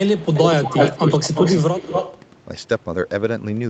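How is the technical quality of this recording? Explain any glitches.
The recording has clear call-related faults: the speech repeatedly dips in level, and a delayed copy of it can be heard behind it. The whole clip is band-limited with nothing above 8 kHz, as a call path would produce.

Speech suppressed in double talk occurs at 0.08–0.35 s, 0.63–0.76 s, 1.22–1.38 s and 1.69–1.73 s. The voice drops by about 15 dB in the first, third and fourth spots and by about 5 dB in the second, so it sounds briefly ducked or chopped. The likely cause is an echo canceller that, with both ends active at once, could not distinguish near-end talk from loudspeaker echo and attenuated everything.

Echo leak is audible at 0.17–0.39 s as a faint copy of the voice about 129 ms late and about 15 dB down. From 0.62 to 2.22 s it returns much stronger, delayed about 224 ms and only about 5 dB below the main speech, which gives a pronounced doubled, slapback quality. 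This is likely residual echo from a far end playing the call on a loudspeaker, where its canceller let part of the microphone pickup pass back.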